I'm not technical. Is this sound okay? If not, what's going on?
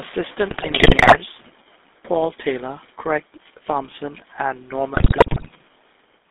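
No. The whole clip has a buzzy, gravelly roughness, and the speech sounds thin and boxed-in, like an old mobile phone call. That is the GSM full-rate codec, the original digital mobile phone coding. It rebuilds speech from a simple model of the voice driven by a regular train of pulses, which leaves the grainy buzz. Here it keeps only a narrow slice of the sound, from about 250 Hz up to about 3.6 kHz, so the sound lacks both depth and crispness.

Twice the speech breaks into squawks, pops and gargling: from 0.50 to 1.16 s, and again from 4.94 to 5.51 s. These are GSM bit errors, damaged pieces of data reaching the decoder, as happens on a weak mobile signal. When the values that set the tone, pitch or loudness are damaged, each short slice of sound comes out distorted or suddenly too loud, so the speech turns briefly into garbled noise.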